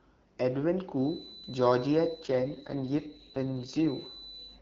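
A speech recording carrying a feedback whistle: from 0.92 s to the end, a thin 4 kHz tone that slowly swells and fades sits well below the speech, likely from a loudspeaker-to-microphone loop held just short of runaway. Between 2.23 and 3.86 s an AMR rate drop makes the speech rougher and more synthetic without narrowing the band, which fits the wideband codec falling from 12.65 to 6.6 kbit/s.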